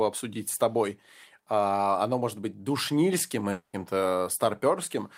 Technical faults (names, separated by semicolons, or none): long network dropout